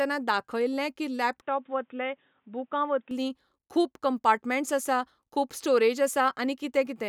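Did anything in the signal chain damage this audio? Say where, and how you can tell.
Yes. From 1.42 s to 3.11 s the speech turns dull and boxy: nothing comes through above 3.8 kHz, the level falls by roughly 5 dB, and a faint new background noise appears well below the speech. The switch happens with no silence. At 3.11 s the full band returns. This points to the capture stage, most likely an input switched to a poorer device. A codec bandwidth drop would narrow the band without changing the level, tone and noise floor all together.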